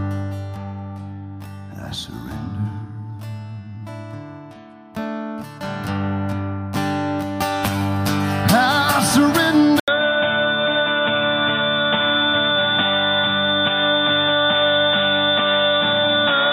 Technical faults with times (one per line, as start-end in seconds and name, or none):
9.80-16.52 input switched to a poorer device